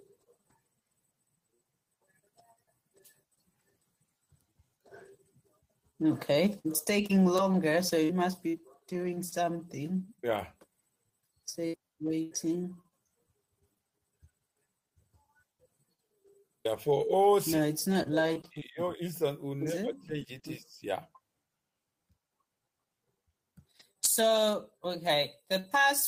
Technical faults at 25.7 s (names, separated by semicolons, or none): pre-emphasis left on